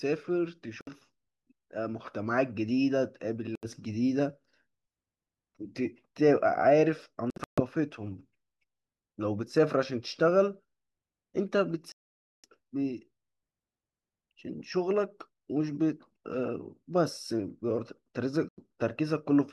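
A speech recording broken by five short silences where the sound cuts out abruptly and then resumes further along, as if it had kept playing: at 0.81 s (about 61 ms), 3.55 s (about 76 ms), 7.30 to 7.61 s (several gaps totalling about 213 ms, the longest about 137 ms), 11.92 to 12.45 s (about 518 ms), and 18.49 s (about 91 ms). These are likely Bluetooth dropouts, where audio packets arrived late and were discarded.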